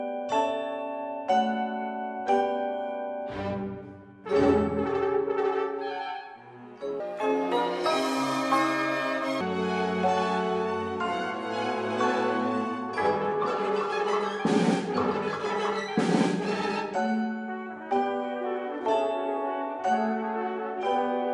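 From 7.00 s to 9.41 s the sound jumps into a wrong sample rate fault: samples are being clocked out about 1.45 times faster than they were captured, which fits material recorded at 22 kHz and played at 32 kHz with no conversion. Everything runs hurried and rises roughly six and a half semitones, chipmunk-like. On a spectrogram, all harmonics and formant bands shift upward and compress in time; the waveform looks squeezed horizontally.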